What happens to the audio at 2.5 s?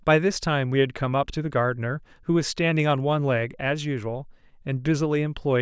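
Nothing goes wrong at 2.5 s; the speech carries on intact through that moment, with no dropout, click or distortion.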